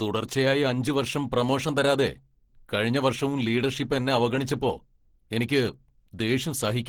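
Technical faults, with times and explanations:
throughout: Opus compression. The speech is plainly damaged, hoarse, grainy and somewhat muffled, likely from Opus in its hybrid speech mode at a low rate near 16 kbps. A spectrogram shows content up to about 20.2 kHz without holes, but the upper bands look smeared and noisy.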